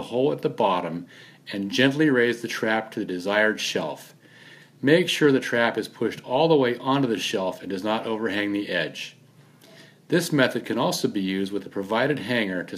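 No technical faults can be heard anywhere in this recording.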